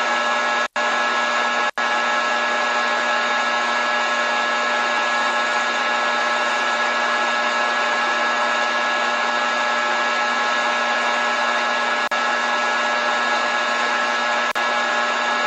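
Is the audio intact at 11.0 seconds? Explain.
Yes, the audio is intact at 11.0 seconds, with no audible fault at that moment.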